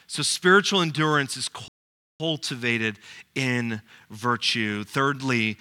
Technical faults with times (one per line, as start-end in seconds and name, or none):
1.68-2.20 playback stall